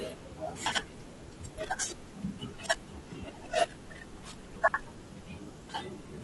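Low-delay AAC compression runs through the whole of this speech clip. The audio is rough and grainy, with noise filling the gaps between pitch harmonics and a thin, synthetic-sounding top band. This is likely AAC-ELD coding, whose short frames resolve harmonics poorly, and damage this plain fits a low rate of about 32 kbps. Chunks out of order occur at 0.66–0.78 s and 4.56–4.74 s. Each time, a 60 ms piece of audio plays after material that should have followed it, so the sound jumbles briefly across the hard joins. The first event is consistent with one chunk arriving late and the second with two, which is why the second lasts longer.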